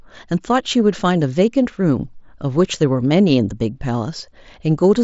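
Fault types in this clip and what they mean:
None: no fault is audible in this speech.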